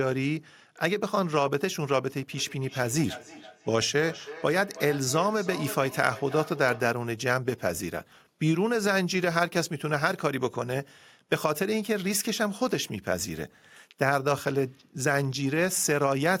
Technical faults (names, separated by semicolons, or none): feedback echo between two devices